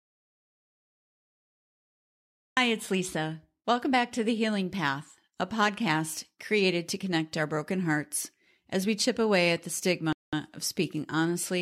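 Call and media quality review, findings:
Audio dropout to silence, 0.00 to 2.57 s: clip opens in dead digital silence with no room tone, and speech enters mid-flow. The likely cause is lost input at the capture device or link, with the recorder writing silence until the signal returned.

Bluetooth stall, 10.13 to 10.33 s: a 0.2 s hole of pure silence right after "chip away at the", then speech resumes. Likely radio interference delaying packets, draining the headset buffer and pausing playback until retransmits arrived.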